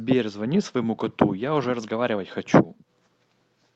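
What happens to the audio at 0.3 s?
Nothing goes wrong at 0.3 s: the speech passes through intact, carried by the call path with its normal limited top end around 8 kHz.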